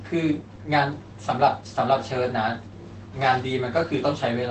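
Between 0.55 and 0.59 s there is a short concealed packet loss. About 20 ms of speech never arrived, and the receiver covered the hole by extending the preceding sound and then blending back. It is heard as a brief smear in the flow.

From 3.49 to 3.51 s, a single lost packet is rebuilt from error correction. The next packet carried a coarse copy of those 20 ms, which the decoder played instead of leaving a gap, so that moment sounds rougher and noisier.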